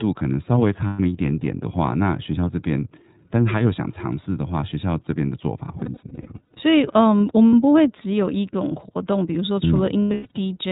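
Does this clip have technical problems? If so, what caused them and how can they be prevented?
Yes. The speech is muffled, with nothing above 4 kHz, and has a slightly rough, synthetic edge throughout. This is iLBC codec coding, which fits its 13.33 kbps mode with 30 ms frames. Using a wideband codec such as Opus at a higher bitrate would avoid it.

At 0.86 to 0.99 s, 5.78 to 6.58 s, 7.48 to 7.54 s and 10.02 to 10.31 s, the sound briefly turns into a held, buzzy or breathy vowel and then recovers at once. These are lost iLBC frames, where the decoder repeats the last pitch cycle with noise to cover missing packets. The first gap is about 120 ms, which fits four frames. The span at 5.78 s has scattered losses, each well under a tenth of a second. The one at 7.48 s is 60 ms, and the last has runs of about a tenth of a second. A steadier network path, a jitter buffer and forward error correction or redundancy would prevent these dropouts.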